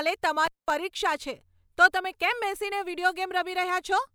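A speech recording with an intermittent contact fault from 0.45 to 0.71 s: a loose cable or plug briefly loses connection, so the signal drops out for about 200 ms, with a crackle as the contact breaks and remakes. While the line is open faint hiss remains. On a waveform this shows as a near-flat gap bounded by sharp spikes. A spectrogram shows a dark band with thin vertical broadband streaks at each edge.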